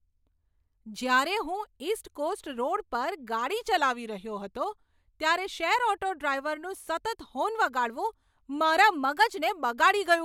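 From 3.78 to 4.57 s the speech slows by 6.1% and sags about a semitone (109 cents) before snapping back. From 8.93 to 9.50 s it speeds up 6.1% and rises 103 cents. Each is likely a drift correction step, where clock-matching software abruptly retimed playback to rebalance its buffer.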